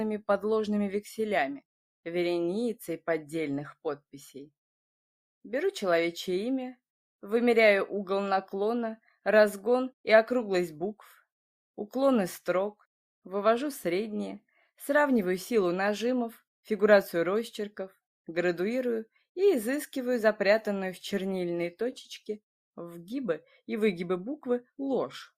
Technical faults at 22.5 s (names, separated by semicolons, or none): none